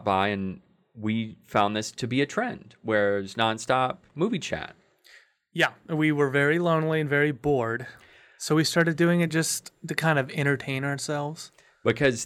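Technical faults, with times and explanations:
0.22, 1.57–1.61, 3.41, 8.79–8.82 and 11.90–12.07 s, hard clipping: five spots where the speech peaks overran what a stage could pass and got sliced flat, by about 1 dB at 0.22 s (just before "and we") and about 2 dB at the rest, including right after "a trend where it's" and just before "doing it just to". Those squared-off tops throw extra harmonics up high, so each one comes across as crackle on the peak.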